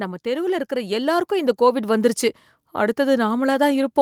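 From 0.23 to 2.02 s, automatic gain rising is heard. The gain control judged the input too quiet. It raised its gain gradually, by about 8 dB. The speech and the background noise swell together over nearly two seconds.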